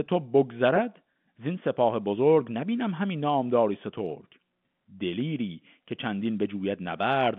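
Nothing in this speech recording stood out as a technical problem on listening.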